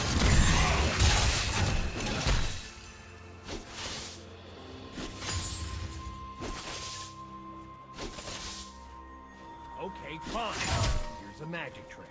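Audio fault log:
No audible faults detected.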